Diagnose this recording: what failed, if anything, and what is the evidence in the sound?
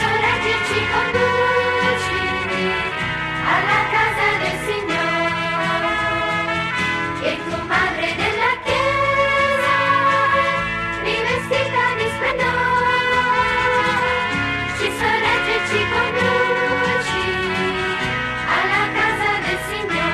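The codec stage failed, with compressed frames skipped. The audio jumps ahead at 1.13, 6.20, 12.30–12.32, 14.86–14.88 and 16.72–16.74 s. Each jump drops roughly 50 to 70 ms, which fits two or three lost frames.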